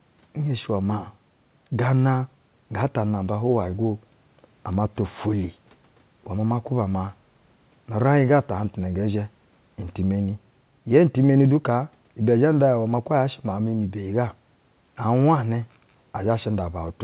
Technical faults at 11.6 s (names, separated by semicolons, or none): none